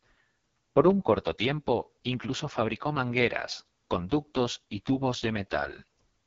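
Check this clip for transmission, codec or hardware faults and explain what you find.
The speech carries AMR wideband (HD Voice) codec damage throughout. The heavy rasp fits the lowest 6.6 kbit/s mode, where the pulse-driven vocal tract model lacks bits to follow the voice closely. Only shaped noise fills the top band, and nothing is present above 7.5 kHz.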